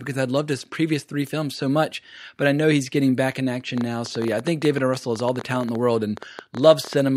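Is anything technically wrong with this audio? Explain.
Yes. From 3.78 to 7.00 s a train of clicks rides over the speech: around 40 similar pulses at an irregular pace, averaging 11.8 per second, peaking roughly 5 dB above the speech. This is likely interference or a faltering interface, heard as uneven ticking that continues through pauses.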